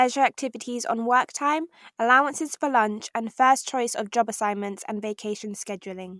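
No technical faults can be heard anywhere in this speech recording. There is nothing in it that needs a time marked or a repair described.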